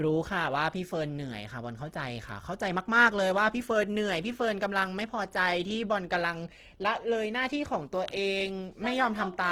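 From start to finish the speech has a rough, grainy texture: voiced sounds carry a gritty edge, though the full treble range is still present and nothing sounds muffled. The likely cause is Opus compression in its music (CELT) mode at a low rate, around 16 kbps by the sound of it, where starved bands are filled with folded or noise-like content.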